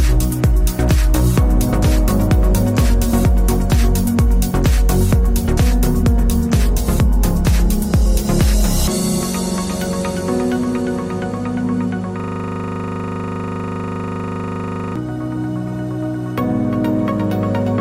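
A system hang loop runs from 12.20 to 14.96 s. One 40 ms piece of audio repeats about seventy times, at a rate of 25 Hz.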